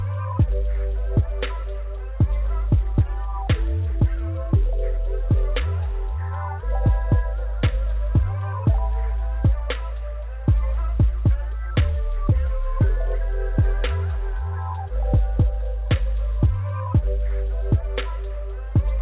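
Nothing stood out on listening; the audio comes through a call path whose top end stops at about 4 kHz, which fits a narrowband telephone codec such as G.711 mu-law.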